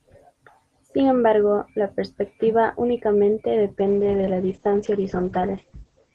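At 3.78 s, right after "embargo la perspectiva únicamente", a call bitrate drop sets in and lasts to the end at about 6.15 s. The encoder is starved of bits, so the speech is coded far more coarsely. The sound turns rough and watery. The top end also narrows, from about 12 kHz down to 8 kHz, so it goes dull. The worst stretch lasts about 1.87 s, at the bottom of a fall from roughly 32 kbps to 9 kbps.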